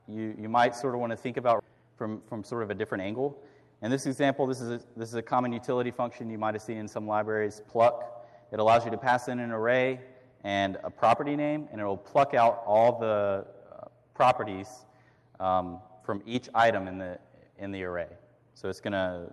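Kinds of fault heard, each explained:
Skip ahead: At 1.6 s playback jumps forward with no gap, so roughly a second of audio never plays and the material on either side is butted together. On a waveform the envelope changes abruptly at that point with no silent stretch between. On a spectrogram the harmonic and noise patterns break off in a clean vertical seam and resume mid-pattern, as though a slice of the timeline had been cut out and closed up.
Jitter buffer speed-up: From 1.68 to 3.43 s the audio runs at about 112% speed while keeping its pitch. The buffer had built up too much delay, so the receiver trimmed short pitch-period-sized pieces again and again, removing around a fifth of a second in total. The passage sounds hurried. The waveform shows compressed timing with subtly spliced cycles, and the spectrogram keeps the same harmonic spacing while events arrive closer together.
One channel drops out: Between 16.17 and 16.35 s the level falls abruptly by about 6 dB, then recovers. 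This is likely one stereo channel being lost for that moment, so the mono sum keeps only half of the shared content. On a waveform the envelope steps down to roughly half amplitude with sharp edges at both ends. On a spectrogram the whole band dims evenly for that short block, with no change in frequency content.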